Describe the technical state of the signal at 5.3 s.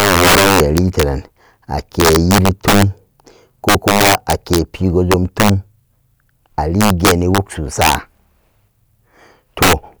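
At 5.3 s the signal is in the middle of an integer overflow that runs from about 5.12 to 5.49 s. The speech is being driven roughly 4 dB past the largest value the integer format can hold, and instead of being limited, each peak that crosses that ceiling wraps around to the opposite sign. The waveform leaps across its full range on those peaks, producing violent, sharp cracks far harsher than ordinary clipping.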